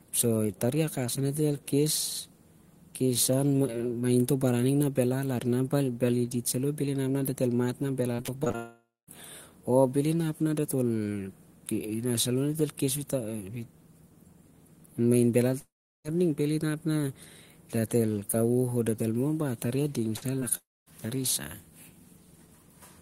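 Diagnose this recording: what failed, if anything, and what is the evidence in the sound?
Repeated packet loss (robotic sound) hits the network path from 8.15 to 8.56 s in this speech. Six gaps of up to 25 ms each are patched by extending the previous sound, about 30% of that span. The result is choppy and robotic rather than one clean hole.

Long network dropouts are heard at 8.56–9.09 s, 15.59–16.06 s and 20.57–20.88 s. Each starts as a fading continuation and then goes silent for about 0.22, 0.37 and 0.23 s. About 0.52, 0.46 and 0.30 s of audio are skipped, most likely from lost network delivery. Unlike a burst, the sound decays to silence.

A burst of packet loss in network delivery at 20.16–20.24 s leaves about 60 ms missing. The receiver bridges it with a held, fading continuation. It is shorter than the dropouts and longer than a concealed smear.

Short concealed packet loss at 20.40–20.43 s removes about 20 ms in transit. 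Around 15 ms of synthesised continuation blends back into the real signal. It is heard as a brief smear, distinct from the audible held fade of the longer burst just before it.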